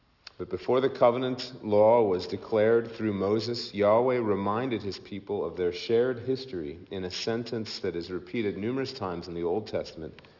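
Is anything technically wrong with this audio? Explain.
Yes, there is aliasing throughout. Content above 6 kHz folds back as gritty, metallic tones roughly 25 dB down, fitting an unfiltered drop to a 12 kHz rate. A spectrogram shows mirrored energy packed hard against 6 kHz.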